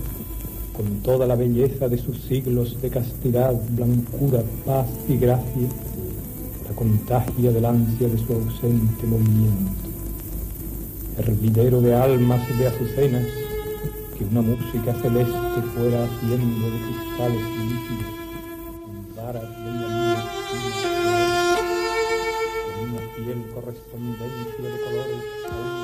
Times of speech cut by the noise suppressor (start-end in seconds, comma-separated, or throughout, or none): none